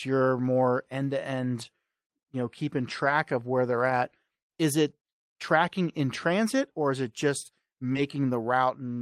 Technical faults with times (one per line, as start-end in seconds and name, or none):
1.61-1.63 lost packet rebuilt from error correction
3.05-3.11 lost packet rebuilt from error correction
3.89-3.91 lost packet rebuilt from error correction
7.93-7.97 short concealed packet loss
7.95 lost packet rebuilt from error correction